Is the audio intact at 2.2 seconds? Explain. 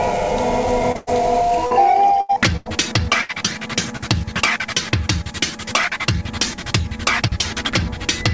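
No. A burst of packet loss from 2.21 to 2.31 s stretches the last music into a fading hold, dropping about 80 ms; spectrograms show smeared, decaying bands, then an abrupt restart.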